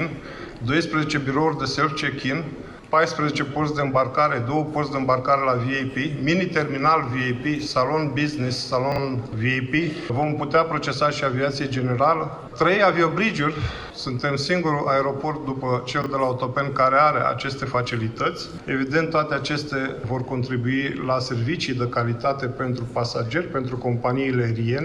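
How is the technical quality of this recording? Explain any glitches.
Two brief ordering glitches interrupt the audio. Chunks out of order at 8.92 s and 16.02 s: a 20 ms chunk plays two, then one, chunk late, leaving three hard joins and a jumbled moment.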